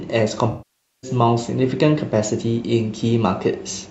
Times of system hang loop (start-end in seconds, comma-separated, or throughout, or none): none